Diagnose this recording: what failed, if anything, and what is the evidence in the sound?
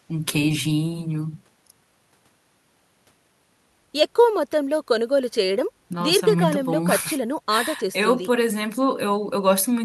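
Nothing in the speech signal points to a failure at any stage between capture and playback: level, continuity and timing hold steady across the whole recording.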